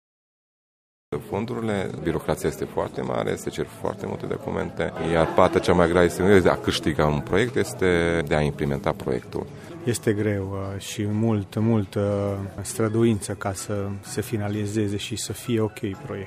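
The opening is a cut-off start. Digital silence runs from 0 to 1.13 s. Then the sound appears abruptly, already mid-event. Capture began late, so the true onset was never recorded. There is no natural attack and no fade-in.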